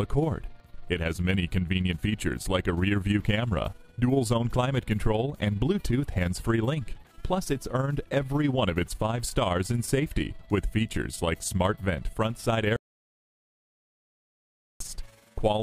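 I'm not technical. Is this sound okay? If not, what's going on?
No, it isn't. All the way through, there is overlap-add ripple. The sound was chopped into overlapping pieces and rejoined unevenly. So the loudness pulses up and down about twenty times a second. That gives a fast flutter.

There is also an audio dropout to silence from 12.76 to 14.80 seconds. For about two seconds the sound stops completely, with no background at all. It likely happened because the input signal was lost, and whatever played then is gone.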